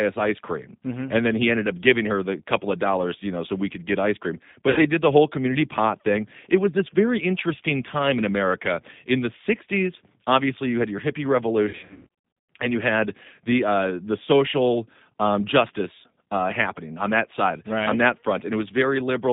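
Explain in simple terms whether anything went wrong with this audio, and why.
Something did go wrong. The call was carried by the G.729 codec, a low-data phone-line coder that rebuilds speech from a simple model of the vocal tract instead of sending the actual waveform. It keeps only roughly 150 Hz to 3.7 kHz, so the speech throughout sounds narrow and muffled, with a plainly audible rough, slightly synthetic edge, like an older internet phone call.

There is also VoIP packet loss concealed by the speech codec, which happens twice. Pieces of the call never arrived, so the decoder guessed by stretching the last sound it had and letting it fade. At 4.70 to 4.86 s, about 60 ms of audio goes missing, leaving a brief stretched sound that fades. From 11.69 to 12.36 s the losses are scattered and repeated, with the longest single gap about 100 ms. The speech there sounds stretched and weak, and it takes a moment to recover after each gap.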